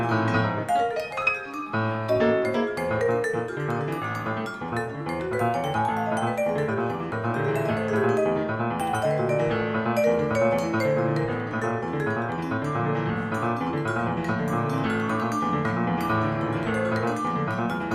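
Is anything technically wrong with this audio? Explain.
No, nothing technically wrong turns up anywhere in this audio.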